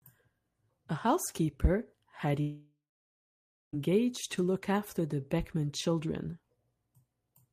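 At 2.41 s the speech cuts off and the last sound is drawn out into a buzzy tail that fades over a few tenths of a second. About 0.9 s of near-silence follows, and the audio resumes at 3.75 s. Roughly 1.3 s of speech is lost rather than delayed. This is likely a long network dropout: incoming audio stopped, the receiver stretched the final fragment to cover the gap, then fell back to silence until the stream returned.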